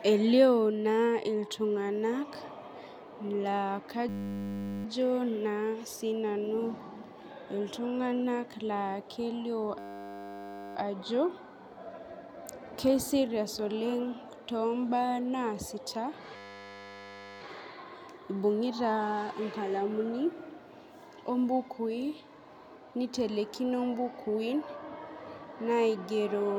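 System hang loop at 4.09–4.85 s, 9.79–10.76 s and 16.36–17.41 s: the system froze while the hardware replayed one 10 ms buffer, producing a steady 100 Hz buzz.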